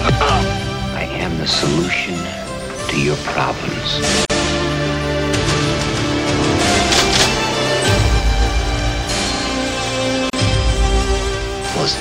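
At 4.25 to 4.30 s and again at 10.30 to 10.33 s, the sound drops out for about 47 ms and then 34 ms: a gap at a join of encoded pieces, recurring every 6 s. Separately encoded segments were butted together with each run's leading delay and padded final frame left in. Each gap is a brief hole, after which the sound resumes where it stopped. A spectrogram shows a narrow blank column across all frequencies with slightly smeared edges; the waveform flattens to near zero.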